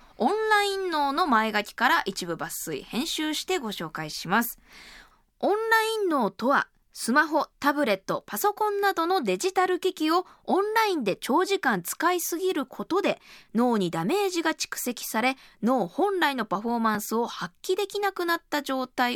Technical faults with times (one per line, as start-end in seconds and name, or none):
16.95 block of digital silence